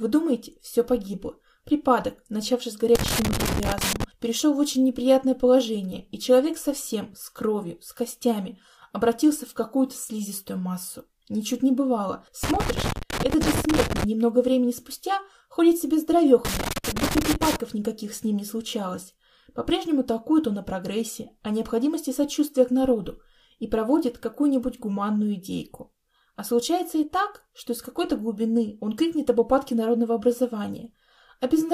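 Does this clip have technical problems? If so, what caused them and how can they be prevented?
Yes. Loose connector crackle appears three times: from 2.95 to 4.04 s, from 12.44 to 14.04 s, and from 16.45 to 17.56 s. Each burst is irregular crackle and scratching, as a worn or dirty contact repeatedly makes and breaks, chopping the signal and letting any DC on the line jump in as pops. Unlike digital dropouts, the clicks are uneven in spacing and level rather than clean, regular gaps. Cleaning or replacing the connectors and securing the cables so they cannot move would prevent it.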